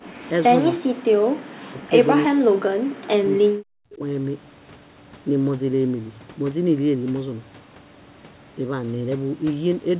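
Right at the start, 0.00 to 0.13 s, the background is gated by the echo canceller, which clamps the mic and pulls the room sound down about 17 dB. From 0.22 to 0.43 s there's an echo leak: a faint copy of the speech trailing by 321 ms, roughly 30 dB under it, likely residue the canceller failed to remove. Then speech is suppressed in double talk at 1.03 to 1.08, 1.68 to 1.86, 2.26 to 2.60 and 3.15 to 4.03 s. The voice drops out deeply each time, likely because the canceller couldn't tell the talker from echo while both sides spoke. The background gates again at 1.36 to 1.40 s, dipping about 23 dB.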